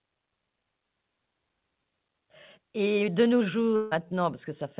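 At 3.76 s the stream of speech most likely hits a long network dropout, with packets failing to arrive for roughly 0.16 s until 3.93 s. The receiver fills about 150 ms of that gap by stretching the last sound it had, so the speech turns into a smeared, buzzy tail that fades rather than cutting to silence. When the audio resumes, the lost portion is simply gone. The narrowband call path, with nothing above 4 kHz, makes that buzzy fill sound dull.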